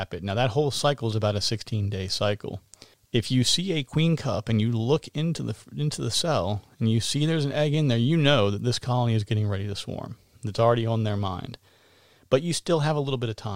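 No faults can be heard anywhere in this speech recording.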